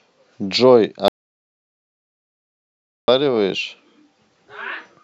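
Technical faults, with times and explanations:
1.08 to 3.08 s, audio dropout to silence: the speech cuts off abruptly and returns mid-flow after about 2 s of silence with no room tone, likely because the input was lost while recording continued writing silence, so everything said then is gone.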